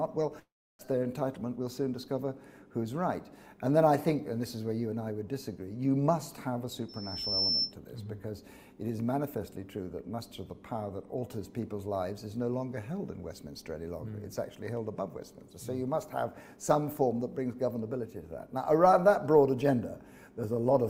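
A long network dropout, likely a stretch of packets that never reached the receiver, begins at 0.39 s. About 0.4 s of audio is lost outright. The receiver first stretches the last sound it had into a fading buzz, then falls to silence for roughly a third of a second. The audio resumes at 0.81 s with the missing portion simply gone, so the sound jumps ahead rather than picking up where it stopped.

From 6.88 s to 7.75 s there is loudspeaker feedback squeal. A microphone is hearing the loudspeaker it drives, and at 5.3 kHz the loop gain has risen above one, so that frequency keeps feeding on itself. It swells over about half a second into a single-pitched whistle that sits about 5 dB above the rest of the audio. It ends at 7.75 s.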